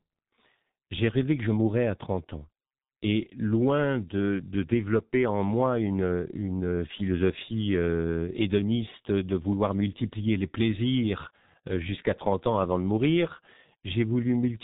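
Throughout the speech, a G.723.1 codec at about 6.3 kbit/s leaves nothing above 3.8 kHz. Its slow, coarse voice model makes everything muffled and hoarse, with smeared consonants.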